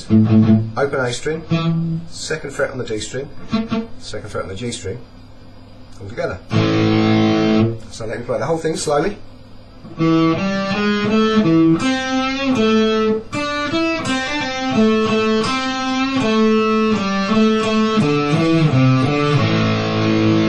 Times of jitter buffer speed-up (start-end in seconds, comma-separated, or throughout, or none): none